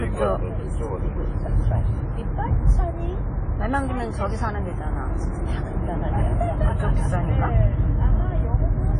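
A low-bitrate encoding, likely from a codec around 32 kbit/s, was re-saved as high-bitrate MP3, so this sound recording is low-bitrate audio saved at a high bitrate. Nothing exists above 10.1 kHz for the full clip, leaving the sounds dull and lacking crisp top detail.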